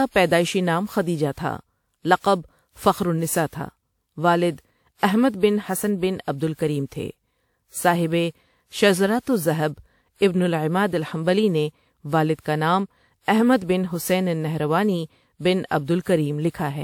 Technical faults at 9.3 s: generation loss

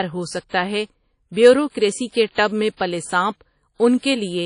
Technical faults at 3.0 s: WMA compression

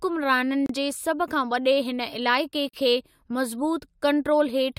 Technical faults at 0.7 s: gap between stream segments

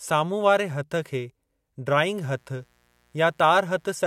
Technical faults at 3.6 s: mains buzz

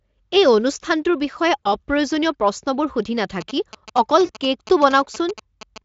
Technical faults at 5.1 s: GSM signalling bursts

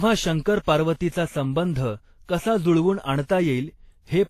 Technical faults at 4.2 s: transcoding between lossy codecs

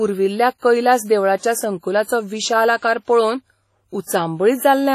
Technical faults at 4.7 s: WMA compression

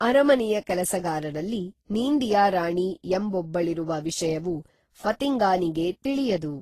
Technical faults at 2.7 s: transcoding between lossy codecs

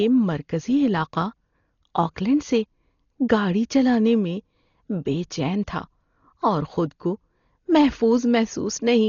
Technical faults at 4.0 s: Dolby Digital compression

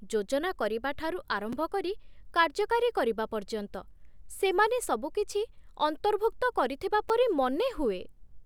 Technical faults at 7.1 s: repeated buffer

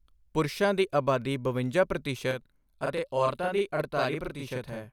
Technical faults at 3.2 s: channel delay (doubling)

